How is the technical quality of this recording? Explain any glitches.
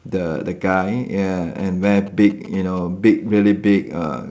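The recording has two glitches on a call path that carries nothing above 8 kHz, which fits a G.722 wideband codec.

From 0.72 to 0.76 s there is a short stall from a late packet. A packet missed its slot and the jitter buffer emptied. The receiver stretched the last sound for about 21 ms, then resumed. Nothing is lost, but that sound hangs briefly. The call runs about 21 ms later afterwards.

From 1.6 to 2.79 s, GSM signalling bursts intrude. A nearby 2G phone was signalling, and the audio circuit rectified its radio bursts. The result is a galloping dit-dit-dit of short buzzes at about 217 Hz. It sits well below the speech.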